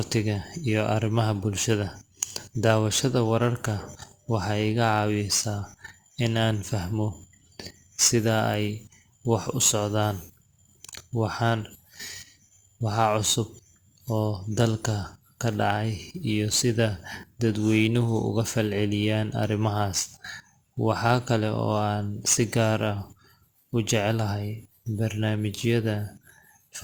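Throughout the speech runs crude rate conversion: samples were simply dropped, with no filter, in a pattern that fits a 48 kHz to 44.1 kHz change. It leaves a gritty, inharmonic fizz roughly 20 dB below loud and bright syllables, seen on a spectrogram as faint stray lines that don't follow the harmonics.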